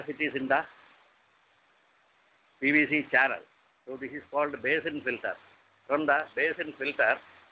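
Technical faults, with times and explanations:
No faults found; the audio has passed through a WebRTC call path whose band stops at 8 kHz, which fits the G.722 wideband codec.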